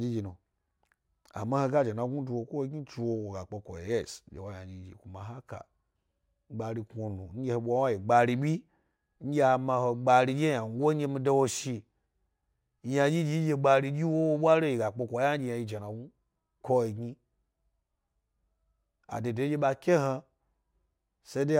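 Imaging from linear upsampling runs throughout this speech clip, which sounds like it was raised from a 24 kHz rate by straight-line interpolation. The top end is dulled, and faint mirrored spectrum between 12 and 24 kHz, roughly 40 dB down, adds a slight metallic shimmer to sibilants.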